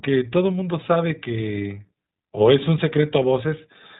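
From start to finish the speech has passed through the iLBC codec, a narrowband VoIP coder that rebuilds the signal block by block, coding each short frame's excitation on its own. The roughness fits its 15.2 kbps mode with 20 ms frames. Nothing above 4 kHz survives, so the speech sounds boxed-in and telephone-like, and the damage is plainly audible: a grainy, slightly synthetic edge sits on the speech throughout.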